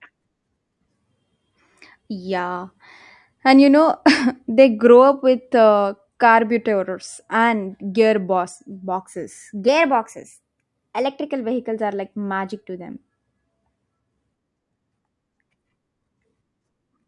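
From 9.68 to 11.31 s, just before "vehicles are like magic", the speech plays at the wrong sample rate. The samples are clocked out faster than they were captured, with no conversion, which fits 22 kHz material being played at 24 kHz. Speed and pitch rise together: the speech runs about 1.09 times too fast and sits roughly 1.5 semitones high, sounding slightly rushed and higher until normal playback resumes.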